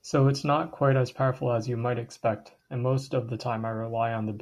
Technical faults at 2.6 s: none

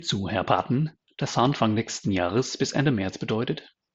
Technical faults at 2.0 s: none

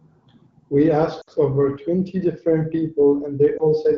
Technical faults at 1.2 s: lost AMR speech frames

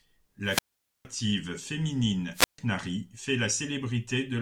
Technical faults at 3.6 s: none

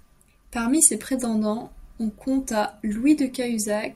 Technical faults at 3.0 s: none

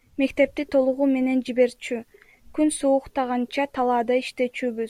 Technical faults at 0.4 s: none

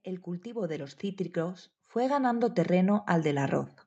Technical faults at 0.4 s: automatic gain rising

